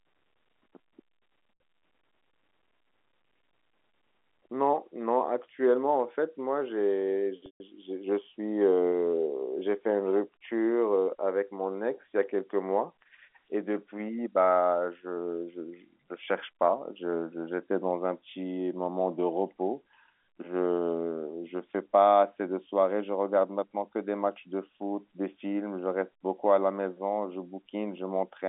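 Packets were dropped twice in this telephone-band speech recording, and the receiver bridged each gap by repeating the last pitch period: packet loss with pitch repetition. At 1.54 s a 60 ms hole, consistent with three 20 ms packets, becomes a briefly held, buzzy tone. At 7.46 to 7.60 s the 140 ms loss, pointing to about seven packets, holds that tone, fades it to silence over about 50 ms, then cross-fades back into the speech. The G.711 line band, roughly 250 Hz to 3.5 kHz, is audible throughout.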